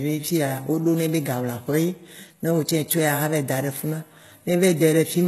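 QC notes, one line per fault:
Throughout, HE-AAC compression: plainly audible codec damage, with nothing above 12.3 kHz. The treble is likely rebuilt by spectral band replication from lower bands at a rate near 16 kbps, so harmonics misalign at the crossover and sibilants turn gritty and metallic.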